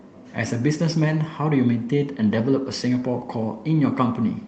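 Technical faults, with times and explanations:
Nothing stood out as a technical problem on listening to this speech.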